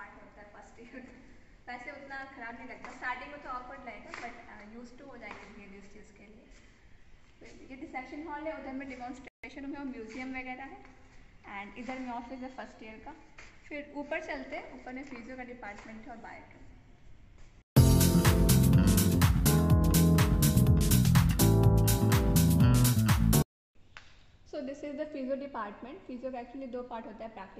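A playback stall hits at 9.28 s: the sound cuts to silence in mid-flow for about 155 ms, until 9.44 s. The player most likely ran short of buffered data or had its output thread blocked, so nothing reached the output until it recovered.

Time-compressed catch-up follows from 9.44 to 9.74 s. To work off the backlog left by the gap, the player drops small slices and cross-fades the joins, running the audio at 1.5 times normal speed. Pitch stays unchanged, but the passage sounds rushed.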